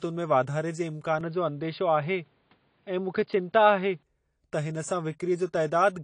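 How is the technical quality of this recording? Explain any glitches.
The recording is noticeably degraded by two faults.

AAC compression throughout: the audio is dull and smeared, with nothing above 10 kHz and a fizzy, warbling texture, likely from AAC-LC at around 32 kbps.

An input switch to a poorer device runs from 1.21 to 4.03 s, right after "में वाधारे जे". The sound narrows to nothing above 4.9 kHz and turns boxy, likely from a change of microphone. There is no gap and the level stays about the same, but faint new background noise sits well below the signal.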